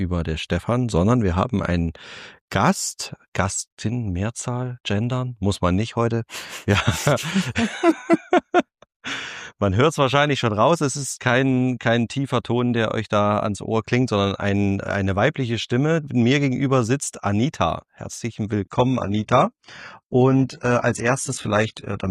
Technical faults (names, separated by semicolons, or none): adaptive stream at a lower bitrate